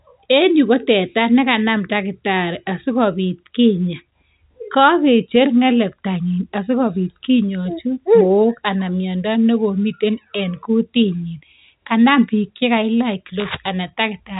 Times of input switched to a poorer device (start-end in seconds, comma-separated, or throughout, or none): none